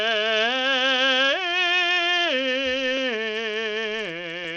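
From the first moment to the last, the music sounds gritty and thin: the top end flickers in and out, and a metallic aliasing clings to the sound. This is likely Bluetooth SBC compression, starved of bits, which fits a low rate near 80 kbps. Its coarse sub-band splitting leaves the weakest treble bands with almost no bits and roughly quantises the rest.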